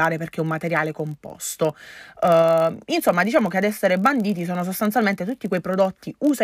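A speech recording with a block size mismatch (padded) running throughout: each block arrives slightly short and is zero-filled, adding a 43.1 Hz buzz. Speed is nearly unchanged (0.999×), which fits a 1024-sample read. A spectrogram shows thin vertical stripes about 23 ms apart, and the waveform shows tiny flat dropouts.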